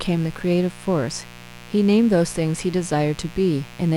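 Mains buzz runs throughout, at 60 Hz: switching spikes twice per cycle spray harmonics into the kilohertz range, a raspy buzz roughly 20 dB below the speech.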